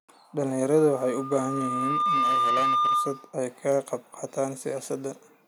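From 0.75 to 3.39 s, loudspeaker feedback squeal builds over about a second and a half into a 1.2 kHz tone roughly 5 dB above the speech. At 3.72 s, a bit error spike produces one sharp, broadband tick unrelated to the speech, consistent with a single corrupted sample.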